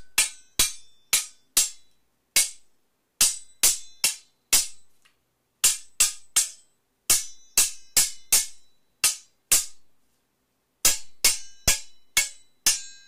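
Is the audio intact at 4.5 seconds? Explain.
Yes, the sound at 4.5 seconds is intact, with no dropout, glitch or other fault at that moment.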